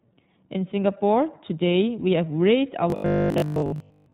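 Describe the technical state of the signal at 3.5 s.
At 3.5 s the speech sits inside a robotic sound from repeated short buffers, running from 2.90 s to 4.12 s. A rigid, metallic 50 Hz buzz follows the natural speech only roughly. This likely comes from late audio being covered by looping a 20 ms chunk, so most of the real signal in that span is skipped.

Underneath, the whole clip carries plainly audible iLBC codec damage. It is band-limited to 4 kHz and sounds slightly rough and synthetic, because each 20 ms frame's excitation is coded on its own. The level of damage fits iLBC's 15.2 kbps mode.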